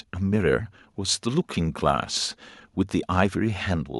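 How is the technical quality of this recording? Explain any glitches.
No glitches are audible anywhere in this speech recording.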